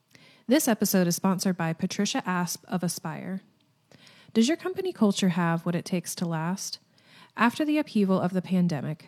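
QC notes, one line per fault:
Nothing stood out on listening to the speech.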